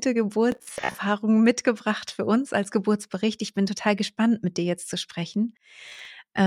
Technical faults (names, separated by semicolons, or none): Bluetooth stutter